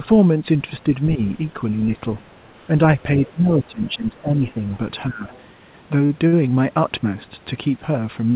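From 0.84 to 1.2 s the speech dips briefly, about 5 dB down across roughly 150 ms in total. This is speech suppressed in double talk: the likely cause is an echo canceller that, with both sides talking, turned down the near talker along with the loudspeaker echo.

From 1.26 to 1.96 s a faint second voice sits underneath, about 35 dB below the speech. This is the other side's voice leaking through, likely because the echo canceller left residue from the far end's loudspeaker playback in the microphone signal.

From 2.71 to 4.63 s the suppression returns much more heavily. The speech drops by about 15 dB in pieces over roughly one and a half seconds, as double-talk suppression again pushes the near talker down. During and just after that stretch, leaked far-side voice surfaces from 3.01 to 3.31 s and from 4.48 to 4.77 s, each time about 25 dB under the speech.

From 5.07 to 5.3 s a shorter cut of about 15 dB, lasting roughly 200 ms, pulls the speech down again. 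A scrap of leakage follows from 5.32 to 5.42 s, about 30 dB down.

At 6.06 s a sound is held about 34 ms too long. From 6.27 to 6.44 s a second hold stretches the sound by 48 ms. Both are a short stall from a late packet. The likely cause is that the jitter buffer ran dry and the receiver extended the last sound until the packet arrived, so nothing is lost, though the timing slips.

Throughout, nothing sounds above 4 kHz, which points to a narrowband call path such as G.711 mu-law at 64 kbps.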